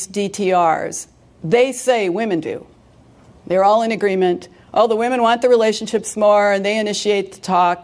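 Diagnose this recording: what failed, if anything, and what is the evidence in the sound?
Nothing failed; the sound gives no evidence of a fault at any stage.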